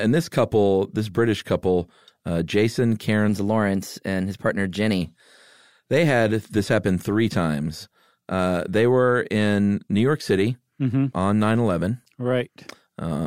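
From 3.29 to 5.01 s the speech jumps up in pitch by about 1.5 semitones and runs roughly 9% fast, a classic wrong sample rate fault. The audio is being played faster than it was captured, with no conversion, which fits 44.1 kHz material going out at 48 kHz.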